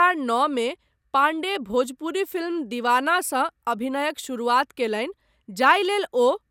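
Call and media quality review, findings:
No audible faults found.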